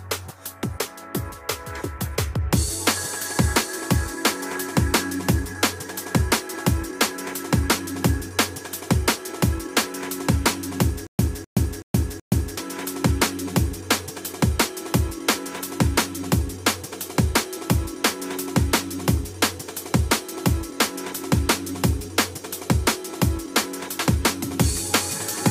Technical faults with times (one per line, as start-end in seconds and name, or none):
11.07-12.57 stutter with silent gaps